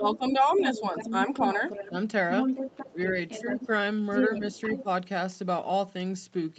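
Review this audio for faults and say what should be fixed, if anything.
The echo canceller likely lost track during double talk, when both ends spoke at once, and turned the near talker down along with the loudspeaker echo. The result is speech suppressed in double talk: from 0.00 to 1.93 s the voice dips by as much as about 10 dB for roughly half a second in total. Shorter, shallower dips of about 5 dB follow at 2.92 to 3.58 s, 4.38 to 4.44 s and 4.83 to 4.87 s.

The canceller also likely left part of the loudspeaker signal in the microphone feed, so the other side's voice leaks through as a second voice under the talker. It appears faintly from 0.03 to 0.16 s, at about 10 dB below the speech. From 0.50 to 1.90 s and 2.31 to 3.67 s it sits about 5 dB down. From 4.10 to 4.84 s it is roughly as loud as the talker, competing with them directly. Much of this overlaps the suppressed stretches, so the canceller's adaptation during double talk is the thing to fix.

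To prevent both faults, use a headset or reduce loudspeaker volume and acoustic coupling, and tune the echo canceller's double-talk detection so it keeps adapting without ducking near-end speech.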